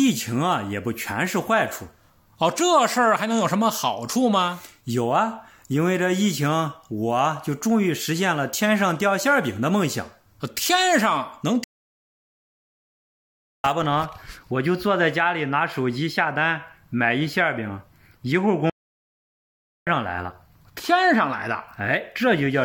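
The audio has two playback stalls, silent from 11.64 to 13.64 s (2.0 s) and 18.70 to 19.87 s (1.17 s), likely from the player running short of data; unlike brief dropouts, these gaps last seconds.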